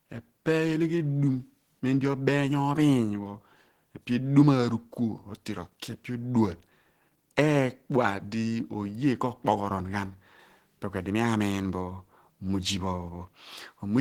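From start to finish the speech sounds muffled and hoarse, with a grainy, rough texture that stays plainly audible the whole way through, even though the top of the spectrum still reaches about 20.2 kHz. This is likely Opus compression running at a low rate that fits around 16 kbps, where the encoder works in its hybrid mode, coding the lower band as speech and filling the upper bands coarsely.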